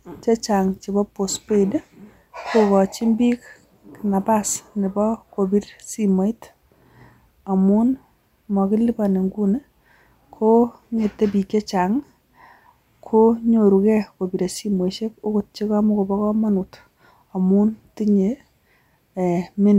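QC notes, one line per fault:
No technical faults are present in the signal at any point in the speech recording.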